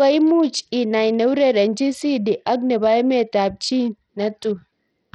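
Throughout the speech, the sound is gritty and thin. Nothing is present above 11.9 kHz, and the upper treble flickers in and out. This is likely Bluetooth SBC compression at a starved bit budget. The top sub-bands lose their bits, and coarse quantisation adds grit and aliasing.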